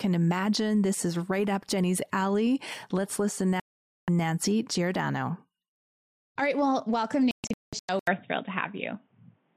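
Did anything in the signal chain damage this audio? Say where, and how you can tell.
Yes. Digital broadcast dropout at the receiver: a clean mute from 3.60 to 4.08 s, then scattered holes from 7.31 to 7.89 s, longest 0.19 s. The silence is a mute rather than smeared by concealment.

From 7.99 s to the end, after an 80 ms gap, the sound loses everything above 3.8 kHz, shifts level about 5 dB and gains a different noise floor. That points to an input switched to a poorer device, likely a headset call profile, rather than a codec narrowing.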